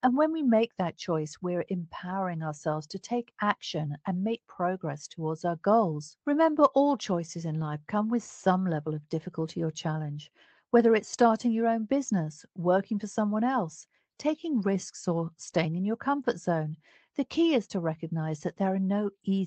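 Nothing stood out on listening to this speech recording, which comes through an ordinary call connection.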